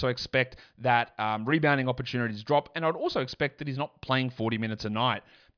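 Nothing in this bit of speech stands out as a technical problem; there's no moment where anything goes wrong to point to.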